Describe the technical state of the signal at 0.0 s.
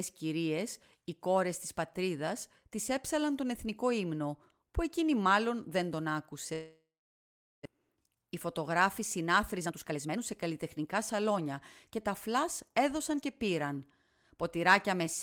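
At 0.0 s the speech signal is intact, with no technical fault audible at that moment.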